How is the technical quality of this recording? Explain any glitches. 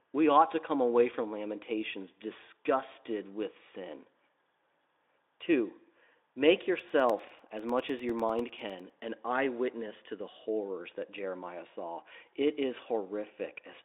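One clear glitch: periodic USB or driver dropouts. From 6.79 to 9.00 s, roughly twenty gaps of about 1 ms of silence arrive every 0.1 s as a string of regular ticks in the speech. Something is blocking the bus or driver on a fixed schedule. Their strict even spacing distinguishes them from irregular network packet loss. The speech itself sits in a narrow 300 Hz to 3.6 kHz Speex band, with faint or no codec damage.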